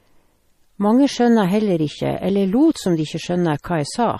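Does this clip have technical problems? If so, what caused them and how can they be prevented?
Yes. MP3 compression runs through the whole clip: the speech has a watery, swirly texture and nothing above 15 kHz, likely from an encoder starved of bits, around 40 kbps, cutting treble and dropping weak detail. Encoding at a higher bitrate would prevent it.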